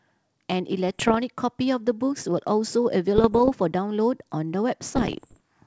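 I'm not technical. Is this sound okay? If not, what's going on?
No. The speech has bit errors on an ADPCM link: pops and rough bursts with brief jumps in loudness at 0.88–1.17 s, 3.16–3.51 s and 4.96–5.40 s. Each flipped bit throws off the decoder's tracking of level, so the roughness lingers briefly.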